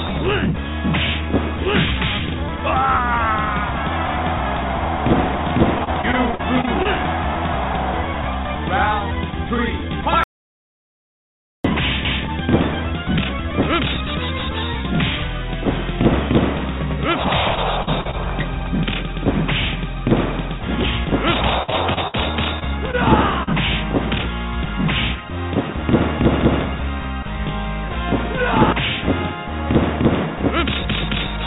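The audio runs through a narrowband call path, G.711 mu-law at 64 kbps, so nothing is present above 4 kHz.

From 5.78 to 6.87 s there is repeated packet loss, with a robotic sound. Nine gaps fall in about a second. Together they miss about 200 ms, and the longest is 42 ms. The receiver fills each hole by stretching the last sound. The result is choppy, with pieces missing.

From 10.24 to 11.65 s there is an audio dropout to silence. The sound cuts out for about 1.4 s. The gap is silent, with no room tone at all. Whatever happened in that span is gone. The cause is likely a lost input or link, with silence written in its place.

The robotic packet loss returns from 17.55 to 18.15 s. Four gaps there miss 120 ms, and the longest is 42 ms. It comes back again from 21.63 to 22.15 s. Four gaps there miss 140 ms, and the longest is 57 ms. This is the densest stretch, with about 30 percent of it patched.

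Right after come three short concealed packet losses: 22.59 to 22.63 s, 22.91 to 22.95 s, and 23.43 to 23.49 s. Each misses 20 to 40 ms. The decoder continues the previous sound across each hole, then blends back. Each one is heard as a brief smear or wobble.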